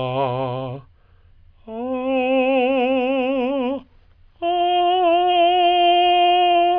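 Nothing to flag in this bit of music: no technical faults turn up anywhere in it.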